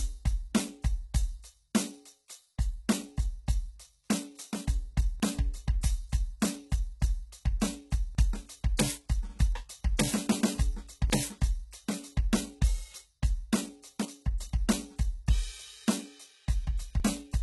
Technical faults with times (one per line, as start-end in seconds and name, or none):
0.00-17.42 HE-AAC compression
5.20 audio missing between chunks
5.81 pre-echo
8.15 audio missing between chunks
8.77 pre-echo
9.97 pre-echo
11.10 audio missing between chunks
17.00 audio missing between chunks